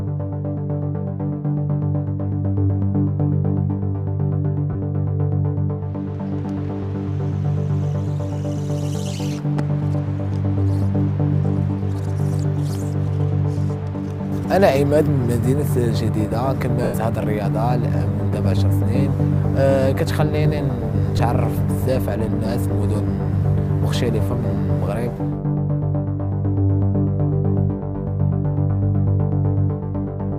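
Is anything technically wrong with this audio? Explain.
Yes. Lost LE Audio frames cause three brief dropouts, at 4.73 to 4.75 s (20 ms lost), 16.84 to 16.94 s (100 ms) and 21.18 s (10 ms). The gap lengths fit a Bluetooth link dropping 10 ms frames. The LC3 decoder covers each gap by repeating the last spectrum with randomised phase signs, so tonal content smears into a short noisy blur. In the longer 100 ms loss the concealment fades toward silence after the first few frames. Light lossy compression is also present, but it is the codec working as designed rather than a fault.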